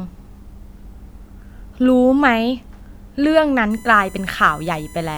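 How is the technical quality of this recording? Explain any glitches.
There's one glitch to flag. From 3.71 s to the end, a USB whine comes in: a steady, fixed-pitch tone built on 1 kHz, loudest at its 2 kHz harmonic, sitting roughly 25 dB under the speech. It's the bus's 1 ms frame current leaking through shared power or ground.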